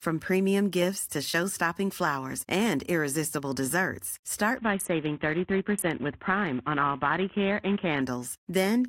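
From 4.57 s, just after "flowers and irresistible desserts", the top end turns muffled and a grainy roughness creeps in until 8.01 s. This is a Bluetooth SBC bit pool drop: starved of bits, the encoder abandons the highest sub-bands and crudely quantises the rest.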